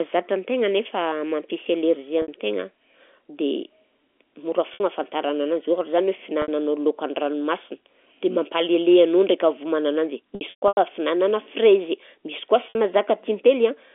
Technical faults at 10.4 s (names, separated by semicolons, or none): packet loss with pitch repetition